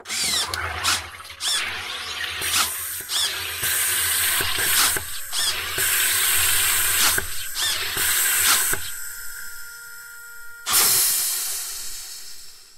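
No technical faults are audible.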